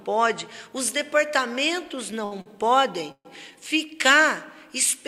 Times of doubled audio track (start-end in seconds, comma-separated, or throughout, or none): none